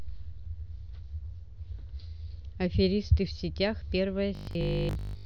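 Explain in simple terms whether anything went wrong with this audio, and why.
Near the end, from 4.35 to 5.25 s, new audio was likely arriving too slowly, so the playback kept filling the gaps by replaying the same tiny 20 ms piece over and over while much of the real speech was skipped. This is robotic sound from repeated short buffers. Those rapid repeats stamp a fixed 50 Hz buzz onto the voice, making it sound stiff and metallic while it still loosely follows the speech.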